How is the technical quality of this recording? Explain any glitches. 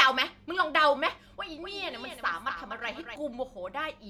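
The recording has one clear glitch: a doubled audio track from 1.62 s to 3.16 s. Over that stretch the speech is shadowed by a second copy of itself that trails roughly a fifth of a second behind and sits a few decibels lower. It sounds like a dry, slap-like repeat with no reverb tail or room colour, and it cuts in and out abruptly at both ends. The likely cause is the same signal being mixed in twice: captured again through a slower path, or held as two misaligned copies in an edit.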